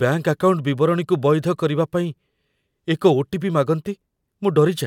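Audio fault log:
Throughout, the speech signal stays continuous and steady, with nothing audible disturbing its technical state.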